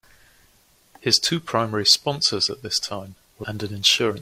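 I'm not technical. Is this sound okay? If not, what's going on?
No. At about 3.39 to 3.45 s, right after "sponsors at this time", there is a brief glitch lasting roughly a twentieth of a second. This is damaged data in a compressed stream: a small piece of the compressed file got corrupted, so the player couldn't read that stretch properly. It lost its place for a moment and had to find where the good data resumed, which comes through as a short chirp or blip in the speech.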